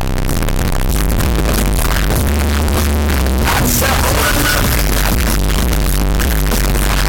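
Throughout, the audio is harsh, saturated distortion with quiet moments as loud as peaks, likely signed and unsigned mixed up on 16-bit samples. The waveform shows large jumps at every zero crossing, and the spectrogram is a broadband wash.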